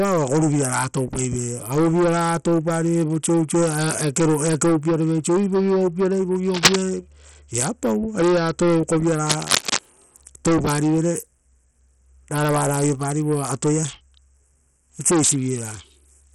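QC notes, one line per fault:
throughout: Bluetooth SBC compression. A coarse, low-budget encode, likely SBC at a rate fitting 64 kbps, starves the upper sub-bands, so treble flickers and gritty noise rides on the speech.
6.54–6.76 s and 9.25–9.79 s: cable scratch noise. A likely worn cable or connector shifting makes dense scratchy bursts, louder than the speech at first, then about equal.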